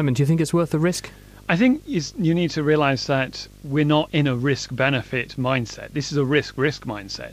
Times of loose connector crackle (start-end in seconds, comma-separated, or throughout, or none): none